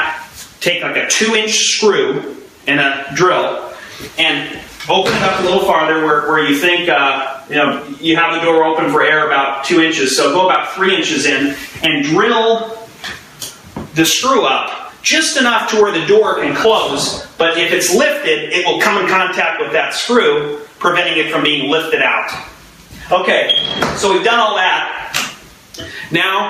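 Gain pumping runs right through the audio, start to finish. Whenever something loud comes in, the gain is pulled down under it, a swing of somewhere around 15 dB. Loud and quiet moments sit oddly close in level, so everything feels squashed. The likely cause is input gain set far too hot for the mic, with a fast limiter or compressor clamping down on every peak.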